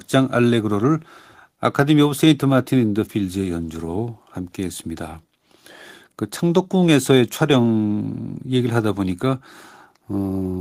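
No technical faults are audible.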